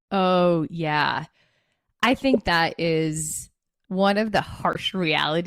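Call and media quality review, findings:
Damaged data in a compressed stream, 2.33 to 2.36 s: a short glitch of about 24 ms in the speech, a chirp, click or brief hole. Probable component is the decoder hitting bad bytes in the stream, misreading the frames, losing sync and hunting for the next frame header.

Same again, 4.72 to 4.77 s: about 52 ms, roughly twice as long as the first one. Same story, with corrupted or missing frame data and the decoder resyncing past it.

Repeated buffer at 2.71 s: a tiny click-like tick rather than an audible stutter. The playback device ran dry and replayed its last chunk once, a piece about 1.45 ms long, which fits a 64-sample buffer. Next audio shows up right after, so essentially nothing gets skipped. Worth checking the output path's scheduling headroom.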